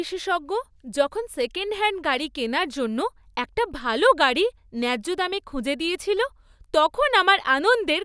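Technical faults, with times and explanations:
No technical faults found.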